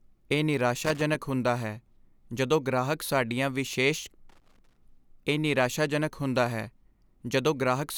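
From 0.84 to 1.15 s and again from 4.29 to 4.78 s the speech breaks into loose connector crackle: a worn contact opens and closes irregularly, chopping the signal into scratchy pops. Unlike steady hiss or evenly spaced buffer clicks, these bursts are ragged and clustered.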